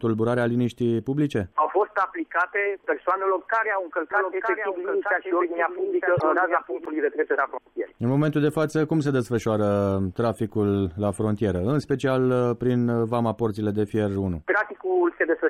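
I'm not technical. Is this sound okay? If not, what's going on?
No. There's a doubled audio track from 4.11 to 6.85 s: a second copy of the same sound plays about a second behind the first, a bit quieter, so everything seems to echo itself without any natural fade. The copy switches on and off abruptly at those times. The likely cause is the sound being picked up twice, once through a slower route, and both versions ending up mixed together.

There are also two spots of corrupt frame decoded, at 6.17 to 6.23 s and at 11.83 to 11.88 s. Each is a very short chirp or burst of noise. The first is quite noticeable and the second much fainter. The audio was stored in small compressed chunks, and a few of these chunks were damaged. The player still tried to play them, so for a split second it produced sound at the wrong pitches.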